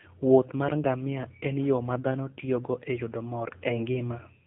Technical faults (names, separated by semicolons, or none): AMR narrowband mobile codec